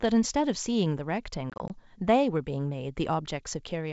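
Between 1.50 and 1.71 s there's packet loss on an ADPCM call: roughly four short hard-edged gaps, none longer than 20 ms, adding up to 80 ms. Each time, the decoder's predictor and step size drift from the sender's, so the speech comes back with some brief, slight distortion.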